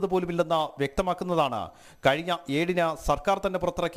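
No fault can be heard anywhere in the clip.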